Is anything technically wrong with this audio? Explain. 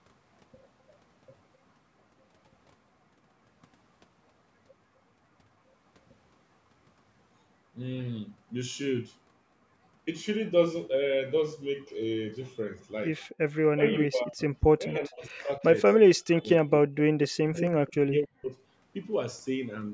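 Yes. Speech suppressed in double talk, likely from an echo canceller that could not tell its own talker from loudspeaker echo, turns the voice down at 13.74–14.42, 14.78–15.62, 16.32–16.90 and 17.25–18.55 s, dipping by about 30 to 40 dB.

An echo leak, likely where a loudspeaker's echo slipped past cancellation and was sent back, puts a 256 ms delayed copy of the voice at 13.93–14.03, 14.91–14.95 and 17.88–17.93 s. These are brief scraps about 20 dB below the speech, and about 30 dB below at the last.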